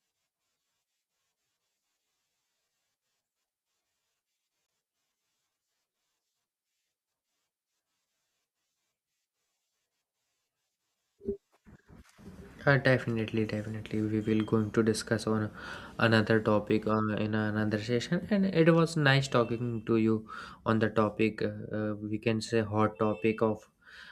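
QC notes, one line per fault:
4.67 to 4.69 s and 16.70 s, block of digital silence: the sound drops to silence for 20 ms, then for about 3 ms just after "to discuss on another", with no fade in or out. The longer gap reads as a brief hole and the shorter as a single tick. Unlike a faded dropout or concealed packet loss, nothing is smoothed or filled in, which points to an output buffer not being filled in time.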